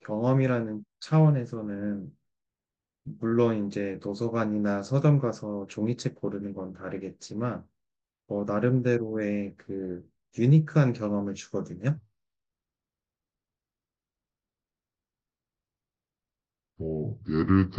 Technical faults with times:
11.97-17.78 section at the wrong speed

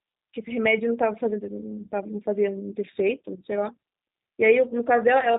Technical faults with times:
0.00-5.39 G.729 codec

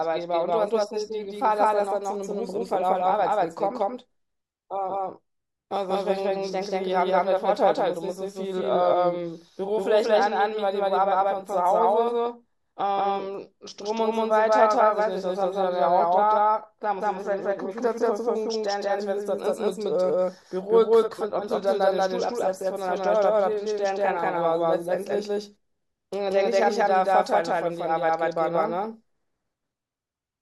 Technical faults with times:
0.00-30.42 doubled audio track

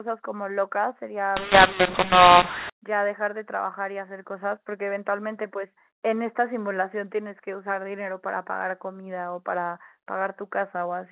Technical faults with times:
1.37-2.70 mu-law and A-law mixed up

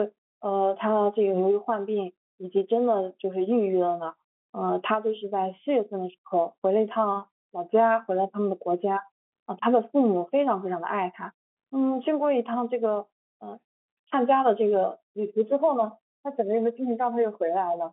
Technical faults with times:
none

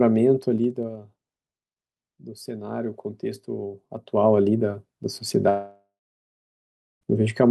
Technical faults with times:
0.55-0.99 zipper noise
3.80-4.28 zipper noise
5.49-7.03 long network dropout

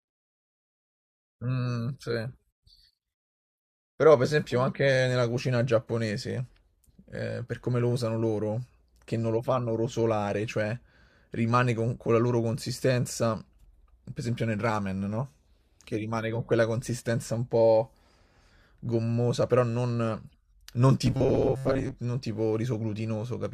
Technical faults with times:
21.06-21.95 robotic sound from repeated short buffers

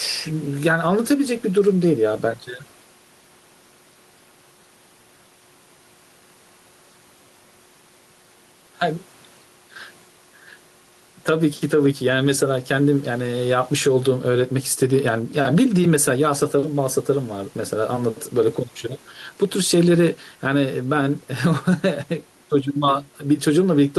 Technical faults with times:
0.00-23.98 gain pumping

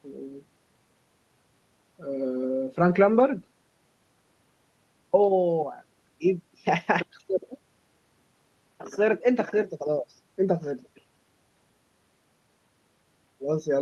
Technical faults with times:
none

